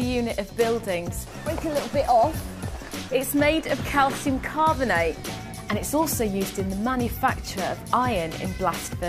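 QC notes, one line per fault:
No audible faults found in this sound on a full listen.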